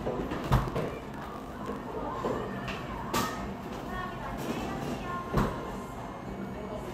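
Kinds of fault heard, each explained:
Block size mismatch (truncated): each block's end is discarded. A 50 Hz buzz runs from 0.34 to 1.81 s. The sound plays 1.07 times fast, timbre unchanged.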